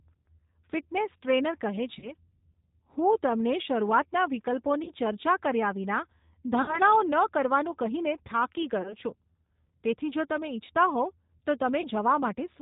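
A speech recording carries the sound of the G.729 codec from start to finish, and the damage is plainly audible. Nothing above 4 kHz survives. Each 10 ms frame is rebuilt from a vocal tract model and a few pulses, so the voice is rough and slightly synthetic. The narrow, rough quality fits G.729 at 8 kbit/s. There are also five dropouts from VoIP packet loss concealed by the speech codec. They fall at 1.99 to 2.11 s, 4.84 to 4.91 s, 6.62 to 6.79 s, 8.82 to 8.95 s and 11.81 to 11.88 s. In each, the decoder keeps repeating its last pitch and filter shape and lowers the level. The sound stretches into a fading buzzy tone or coloured noise. Four gaps are 30 ms, which fits one lost packet. The 6.62 s gap is 60 ms, which suggests two in a row. Each disturbance outlasts the gap because the decoder needs time to recover.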